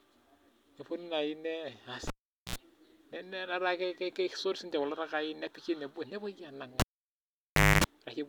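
Cable pulled and plugged in at 2.07 s and 6.80 s: a live lead is yanked and reinserted. Each time a pop drops the speech to near silence, about 0.43 s and then 0.99 s. A mains buzz follows as only the plug tip makes contact, at 60 Hz for 67 ms the first time and 50 Hz for 252 ms the second. A second pop brings the sound back at 2.56 s and 7.84 s.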